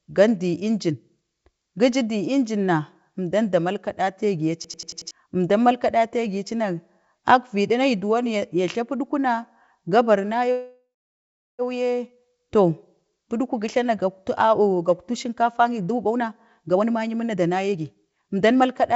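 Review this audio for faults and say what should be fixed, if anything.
From 4.64 s to 5.11 s, a hard, rapid machine-gun stutter replaces the sound: a 92.9 ms fragment repeats exactly five times at about 10.8 Hz, and roughly half a second of real audio never appears. This is a system hang loop. The computer or audio driver stalled, so the sound hardware kept replaying its last ring buffer, a length that fits a 4096-sample buffer. Fixing the driver or the thread that feeds the buffer, so it never blocks, would prevent this.

At 10.52 s the last sound is stretched into a fading buzz that sinks into about 0.71 s of silence. Normal audio resumes at 11.62 s, exactly where it left off. This is a call audio freeze, and the likely cause is delayed packets draining the jitter buffer. The receiver filled 1068 ms, nothing was lost, and the audio that follows runs over a second later than before until the speed-up. 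Improving network stability or increasing the jitter buffer's depth would prevent this.

From 14.68 s to the end at 18.96 s, the audio sounds hurried while its pitch stays unchanged. It runs at about 120% of normal speed, and roughly a second is trimmed away. This is a jitter buffer speed-up. The buffer held more audio than its target, so the receiver cut many short pitch-period pieces to bring the delay back down. This happens within the G.722 call path, which passes nothing above 8 kHz. Smoothing the delivery of delayed packets, or catching up more gradually, would prevent this.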